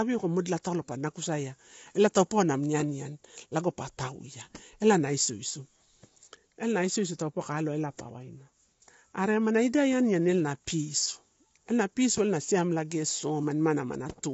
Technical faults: low-delay AAC compression

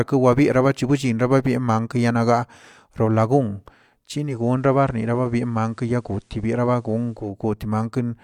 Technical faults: digital radio blending to analogue

